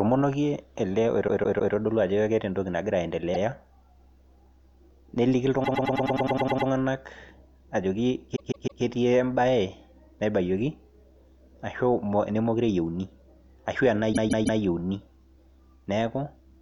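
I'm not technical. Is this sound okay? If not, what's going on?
No. The speech has repeated frames: short chunks replay, causing stutters at 1.27 to 1.74, 3.33 to 3.41, 5.63 to 6.68 (the longest), 8.35 to 8.82, and 14.12 to 14.59 seconds.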